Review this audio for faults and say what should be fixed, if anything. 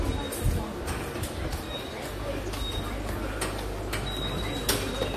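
Mains hum comes in at 2.06 s and runs to the end: a steady 50 Hz tone, nearly as loud as the sound itself, from the power line leaking into the signal through a ground loop or a nearby transformer. To prevent it, keep the rig on one grounded supply and route cables away from transformers.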